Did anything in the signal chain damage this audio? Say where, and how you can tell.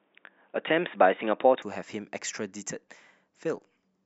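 Yes. From the start to 1.62 s the speech is dull and boxy, with nothing above 3.7 kHz, a different background hiss roughly 45 dB under the signal, and a level offset of about 5 dB. Then it clears abruptly, with no gap at the switch. This is likely an input switched to a poorer device at the driver stage. A codec low-pass would not also change the noise floor and level together.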